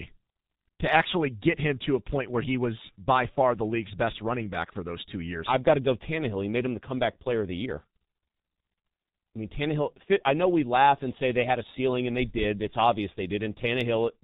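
From start to finish the speech passes through a G.723.1 codec, and the damage is heavy. The codec squeezes the signal into 30 ms frames and refits its model of the voice only slowly. The hoarse texture fits a rate of around 6 kbit/s. Nothing above 4 kHz survives, so the sound is muffled and dull. Consonants smear into the vowels around them, and rapid changes in the speech come out blurred.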